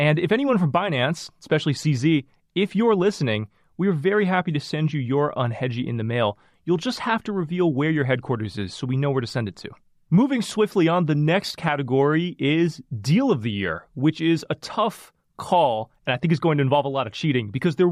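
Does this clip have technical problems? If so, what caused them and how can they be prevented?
No, there are no technical faults to point to anywhere in this speech recording. With nothing going wrong, there is no cause to trace and nothing that needs preventing.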